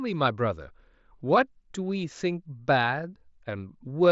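Nothing technically wrong can be heard in this speech recording. It has passed through a Bluetooth mSBC headset codec working as intended, so the sound stops at about 7.7 kHz and carries only the light grain that this wideband headset link leaves behind.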